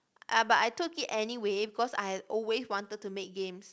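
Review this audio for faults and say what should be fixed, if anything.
Nothing here needs fixing. The speech has been through a call path, and nothing sounds above 8 kHz, which fits a wideband call codec such as G.722.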